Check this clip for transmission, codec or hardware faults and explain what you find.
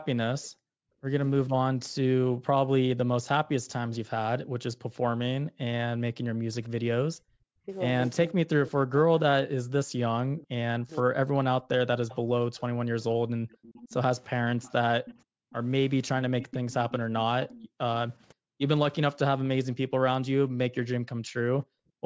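Three kinds of fault run through this speech clip, all tied to echo cancellation on a speakerphone call.

Speech suppressed in double talk: From 0.11 s to 21.69 s the talker's voice repeatedly sags, thins out or breaks into fragments, at worst dropping by around 40 dB, for roughly five seconds in total. The likely cause is both sides speaking at once. The echo canceller could not tell the near talker from the loudspeaker's echo, so it attenuated everything.

Background gated by the echo canceller: The room sound abruptly vanishes and then returns, falling by about 40 dB each time. This happens briefly within 0.49–2.43 s (a few tenths of a second overall), within 15.37–18.61 s (under half a second overall) and again at 21.97–22.05 s. Each time, the canceller clamped the microphone hard while far-end audio played, then released it.

Echo leak: Between 12.09 s and 18.24 s a faint, delayed second copy of the speech trails the original by about 0.53 s, sitting around 20 dB below it. 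It sounds like a ghostly repeat. This is likely residual loudspeaker sound that one side's echo canceller failed to remove fully from its microphone, so it was sent back down the line.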